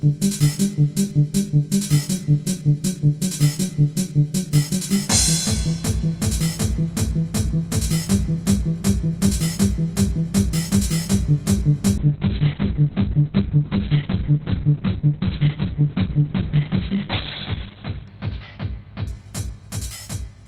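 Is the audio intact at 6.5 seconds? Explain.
No. At 6.5 seconds, as throughout the clip, channel delay (comb filtering) is present: one channel lags the other by about 20 ms before mono summing, cancelling evenly spaced frequencies from around 30 Hz upward. It sounds rough and slightly doubled, and a spectrogram shows fixed, evenly spaced dark horizontal notch bands.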